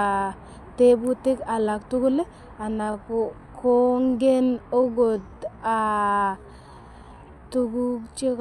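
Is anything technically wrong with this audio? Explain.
Yes. From 2.7 s to the end, a time-stretched section: software likely slowed the speech to 0.67x, repeating short pieces to hold pitch, so the pace drops abruptly and drags.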